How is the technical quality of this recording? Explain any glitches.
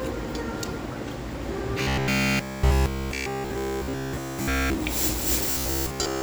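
The recording has a serious fault: two stretches of robotic sound from repeated short buffers, at 1.82 to 4.78 s and 5.51 to 6.22 s. The likely cause is audio arriving too slowly, so playback keeps looping a fragment of about 15 ms instead of the real signal. That loop imposes a fixed 66.7 Hz buzz. In the first stretch essentially all the sound is replaced, giving a hard metallic drone. In the second, most of it is.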